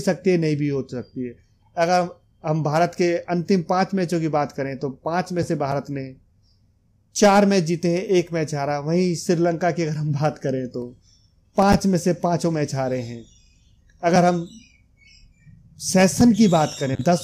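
Nothing to flag here: there's no technical fault anywhere in the clip.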